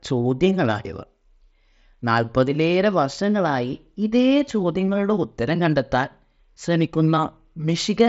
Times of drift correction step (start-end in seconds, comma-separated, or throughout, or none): none